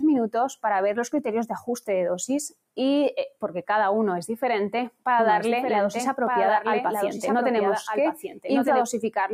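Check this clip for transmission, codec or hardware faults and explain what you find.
Three problems stand out, all from processing in the signal chain rather than the transmission link.

A noise suppressor applied to music or sounds runs through the whole clip. It was built for speech. It treats held tones, ambience and tails as noise. Level swings by around 5 dB, so sustained sound pumps and thins while attacks pass.

Sound cut by the noise suppressor occurs twice, from 1.6 to 1.89 s and from 8.28 to 8.44 s. The suppressor judged that material to be noise. It pulled it down hard, by about 15 dB and about 18 dB. Each dip lasts roughly 150 ms, and the sound sinks in level or its tail is cut short.

A doubled audio track appears from 5.19 to 8.81 s. A full-band copy trails the original by about a second, about 5 dB quieter. It has no room colour and starts and stops abruptly. The likely cause is a second, slower capture path or an out-of-step edit.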